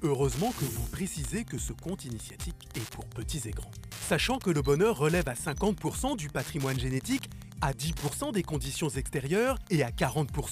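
From start to finish a Wi-Fi interference tick runs under the sound: a steady, dry clicking about ten times a second, sitting roughly 20 dB below the signal. A nearby Wi-Fi radio's beacon, sent every 102.4 ms, is being picked up and rectified by the audio circuit. On a spectrogram it shows as evenly spaced thin vertical lines across a wide band. On the waveform it appears as a train of small, sharp spikes at that spacing.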